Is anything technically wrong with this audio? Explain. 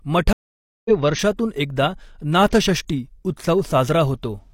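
Yes. There is a stream reconnect from 0.33 to 0.90 s: about half a second of silence, after which the speech resumes at "वर्षातून एकदा नाथषष्ठी" with roughly a third of a second of the stream skipped. A simple dropout would pick up where the audio left off. Here the link broke and a fresh decoder rejoined the live stream further ahead.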